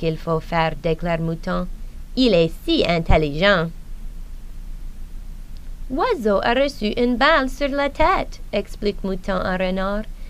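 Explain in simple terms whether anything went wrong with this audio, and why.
Nothing went wrong with this audio. Listening through the whole recording, no technical problem can be heard at any point.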